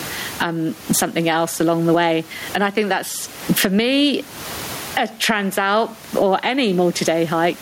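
Throughout the speech, the gain pumps, swinging around 20 dB and squashing loud and soft parts closer in level. This is gain pumping, likely from excessive gain driving a fast limiter.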